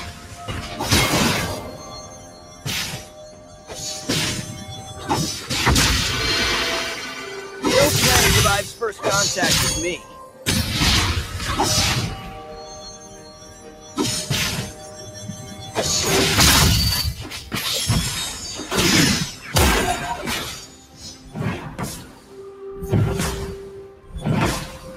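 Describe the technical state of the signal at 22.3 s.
At 22.3 s the sound sinks, dropping by about 7 dB between 21.98 and 22.37 s, with its sustain and decay pulled down while sharper onsets get through. This is sound cut by the noise suppressor: it mistook this sound for noise and attenuated it harder than the surrounding audio.

That dip sits within a wider fault present across the clip, a noise suppressor applied to music or sounds. Its gain rides up and down by roughly 10 dB, so steady tones and tails pump and thin while attacks pass, because a speech-tuned suppressor treats sustained content as noise to remove.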